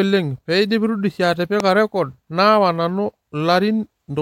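A speech recording with a single loud pop from 1.60 to 1.62 s: a sharp, brief crack that stands well above the speech, peaking around 15 dB higher, while the talking carries on beneath it. The likely cause is a sudden voltage spike, such as a switch, plug contact, static discharge or driver glitch, added to the signal.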